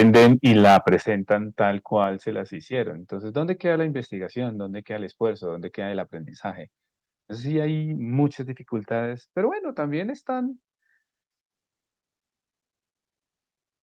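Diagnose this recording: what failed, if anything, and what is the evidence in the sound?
Microphone overload at the converter. From 0.0 to 0.95 s, peaks run about 12 dB past full scale. A large share of samples is flattened, giving a harsh, crackling edge. A milder repeat at 1.31–1.33 s is about 1 dB over. The likely cause is input gain set too high, so the tops are sheared off.

Microphone volume stepped down in call processing. At 1.02 s, speech and background drop together by about 10 dB in a single step. It comes right after the heavy distortion. The call software likely detected clipping and cut the device's input gain at once.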